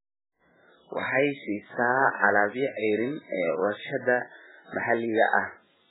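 From start to finish the speech sounds heavily watery and swirly, with smeared attacks and no content above 3.8 kHz, leaving it dull and muffled. This is likely MP3 compression at a very low bitrate, consistent with about 8 kbps, where starved frames cut the treble and drop weak spectral lines.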